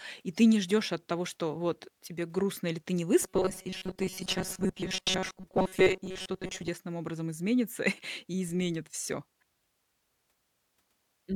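New audio likely arrived too seldom from 3.21 to 6.69 s, between "грустно или ты не" and "образом изменится", so a buffer of about 5 ms was repeated through most of it. The result, robotic sound from repeated short buffers, is a rigid metallic 188 Hz buzz.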